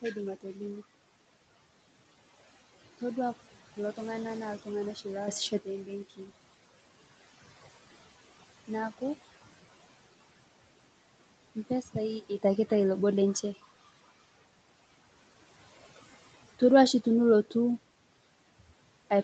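Noise suppressor artifacts run through the whole clip. The suppressor treats the steady room noise, about 19 dB below the speech, as something to remove and lowers it by about 16 dB in the gaps. The background then sinks between phrases and rises again under the speech.

Speech cut by the noise suppressor occurs from 6.09 to 6.3 s. The suppressor mistakes part of the speech for noise and turns it down with the background, by up to about 12 dB over roughly a tenth of a second, so that stretch sounds swallowed and faint.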